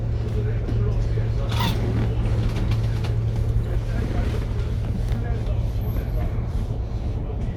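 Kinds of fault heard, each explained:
No faults can be heard.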